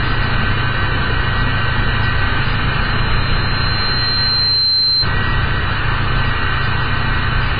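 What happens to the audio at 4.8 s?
At 4.8 s a loudspeaker feedback squeal is near its peak. It runs from 2.80 to 5.09 s: a single 4.1 kHz tone that swells over about two seconds until it stands roughly level with the sound itself. The loop from loudspeaker back into the microphone has gain above one at that frequency, so the tone keeps growing. That self-growth sets it apart from a steady interfering whistle. Underneath, the audio has nothing above 5 kHz and the smeared texture of heavy compression. This is likely low-bitrate audio saved at a high bitrate, an early 16 kbit/s-class encode re-saved as 192 kbit/s MP3. A genuine 192 kbit/s encode would keep far more high-frequency content.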